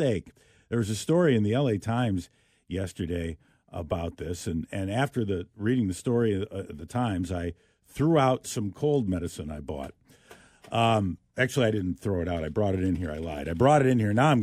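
Nothing in the speech stood out as a technical fault on listening.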